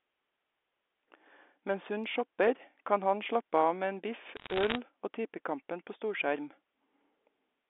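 From 4.36 to 4.76 s, sharp ticks and crackle sit over the narrowband telephone speech. These are bit errors on a digital phone line: roughly one bit in a hundred flipped in the G.711 stream, each corrupting one sample, with sign or high-bit hits giving the loudest clicks.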